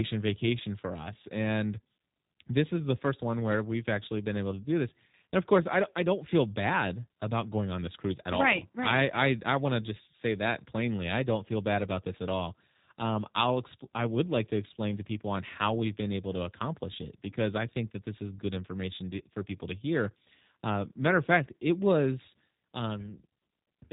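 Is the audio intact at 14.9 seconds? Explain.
No. At 14.9 s, as across the whole clip, the speech sounds rough, slightly synthetic and muffled, with nothing above about 3.8 kHz. This is G.729 codec damage, which fits an 8 kbit/s VoIP stream rebuilding speech from a vocal tract filter, pitch predictor and sparse pulses.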